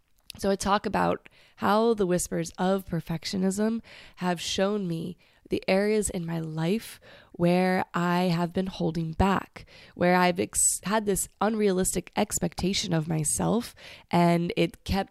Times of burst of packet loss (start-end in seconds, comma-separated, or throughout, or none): none